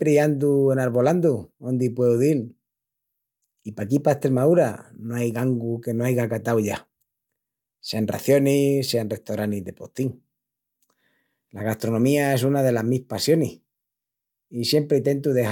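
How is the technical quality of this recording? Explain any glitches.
Nothing here trips me up: I listened to the speech with an ear out for glitches and didn't catch a single one.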